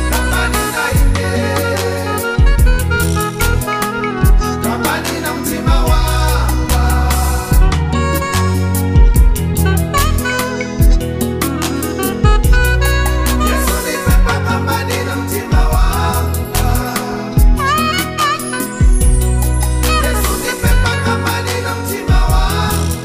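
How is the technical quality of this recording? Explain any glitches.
The recording is technically sound, with no glitches to report. Nothing in the audio breaks, drops out or jumps at any point.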